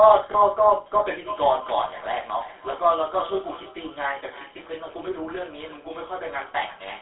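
The whole recording carries the sound of the GSM full-rate codec. The speech has a buzzy, gravelly roughness. That comes from the codec's vocal-tract model being driven by a coarse pulse train, with much of the excitation detail thrown away. The band is narrow, roughly 300 Hz to 3.5 kHz, so highs and deep lows are gone. The damage is plainly audible. The grain fits the old 13 kbps full-rate coder.

From 0.32 to 0.35 s there is a lost GSM frame. It is a single dropout of about 20 ms. The decoder had no good data for that slot. It reused the settings of the previous frame. The result is a brief rough, metallic catch in the sound rather than a clean gap. It is short, so it never fades to silence.

From 1.09 s to the end, a feedback echo between two devices appears. Two devices sit in one room on the same call. One plays back what the other's microphone sent, and that microphone hears it again. 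Neither echo canceller removes the other device's playback. Each phrase returns after about a third of a second. The repeats sound thinner and more ringing. At their loudest they sit about 17 dB below the direct speech.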